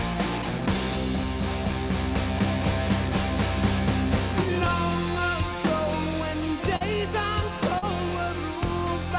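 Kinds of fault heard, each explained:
Short concealed packet loss: at 6.76 s and 7.78 s about 40 ms of the call arrived too late to decode, and the receiver papered over each gap by extending the preceding sound before easing back into the real signal, leaving a brief smeared, wobbly patch in a band that stops near 4 kHz.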